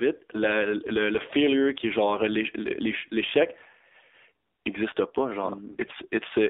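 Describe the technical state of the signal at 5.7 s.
AMR bit errors: from 5.68 to 6.07 s, just after "existe pas", flipped low-protection bits, roughly one in twenty across what fits about 20 frames, misplace the excitation pulses. The sound turns hoarse, scratchy and gargly while keeping its pitch and level. Underneath, the AMR narrowband mobile codec, at a low rate near 7.4 kbps, limits the band to 250 Hz to 3.6 kHz and leaves a plainly buzzy, synthetic tone.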